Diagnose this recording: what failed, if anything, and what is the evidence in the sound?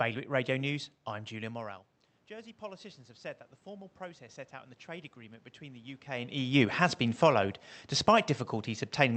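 Call processing shows automatic gain rising from 1.34 to 6.53 s: voice and room noise swell together about 8 dB before "has been followed", as AGC chases a quieter input.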